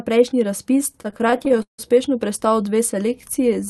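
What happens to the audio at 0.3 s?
Nothing goes wrong at 0.3 s: the speech passes through intact, with only the ordinary character of the Opus call path, whose band tops out around 12 kHz.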